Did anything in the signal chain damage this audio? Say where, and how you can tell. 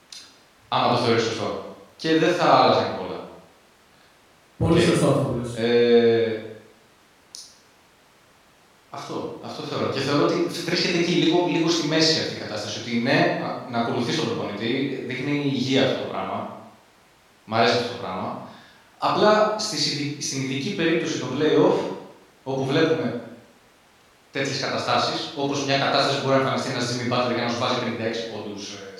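No, nothing in the chain audibly damaged this speech.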